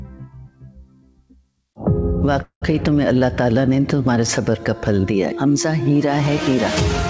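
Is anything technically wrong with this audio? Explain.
Yes. A noise suppressor built for speech was applied to non-speech audio throughout, treating steady tones and tails as noise and pulling them down, so levels swing by around 15 dB.

Sound cut by the noise suppressor, 0.07 to 1.77 s: sustained or decaying material was judged to be noise and sinks by up to about 19 dB, thinning it.

Call audio freeze, 2.42 to 2.64 s: the last sound is stretched into a fading fill that drops to about 100 ms of silence, likely because delayed packets drained the jitter buffer. Playback then resumes where it stopped, inserting a gap of roughly 0.2 s with nothing lost.

The audio passed through a call path, and nothing is present above 8 kHz, which fits the G.722 codec's bandwidth.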